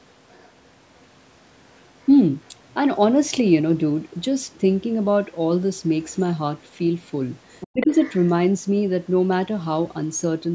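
An echo canceller that likely failed to fully remove the far end's loudspeaker sound from the microphone lets the other side's voice leak through in short scraps at 0.28 to 0.52 s, 1.72 to 1.82 s, 2.01 to 2.10 s, 2.45 to 2.51 s and 6.11 to 6.15 s. Each sits very far below the main speech, around 35 to 40 dB down, and comes through only faintly. From 7.60 to 8.31 s the leak is much stronger, only about 15 dB under the speech.

In that stretch both sides were talking at once. The canceller likely could not separate the near talker from the loudspeaker echo and turned everything down, so from 7.71 to 7.92 s the speech is suppressed in double talk. For roughly a fifth of a second the voice drops deeply, by around 30 dB at worst, while the other side's voice continues underneath. The call's microphone processing, which passes nothing above 8 kHz, gives the whole clip a band-limited character.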